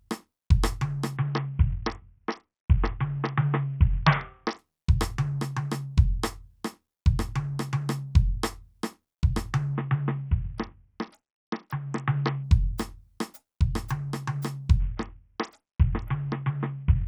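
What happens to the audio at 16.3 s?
At 16.3 s you're in the middle of a Bluetooth SBC bit pool drop that runs from about 14.80 s to the end of the music. The link got squeezed, so the encoder cut its bit budget hard, which fits a bit pool falling from 31 to about 6, or roughly 55 kbps. The top sub-bands get starved and the rest are quantised coarsely, so the treble goes dull and a gritty noise creeps in.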